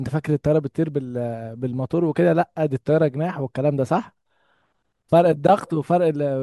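Speech recording with no audible technical faults anywhere in the clip.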